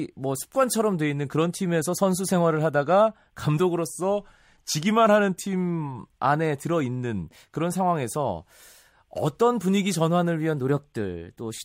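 From 3.90 to 5.99 s the speech drops about a semitone and slows by about 6%, then snaps back; from 10.55 s to the end it jumps about a semitone sharp and runs 6% fast. Both are likely a drift correction step, with clock-matching software changing playback rate abruptly.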